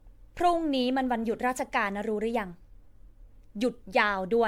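From start to end the speech carries generation loss: a swirly, hollow smear with blurred attacks, likely from re-encoding around seven times in a lossy codec, which fits MP3 at 96 kbit/s. A spectrogram shows accumulated spectral holes and speckled noise, with nothing above 19.9 kHz.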